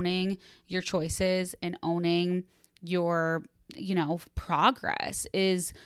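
A short bit of speech, and there's nothing technically wrong to point to anywhere in it.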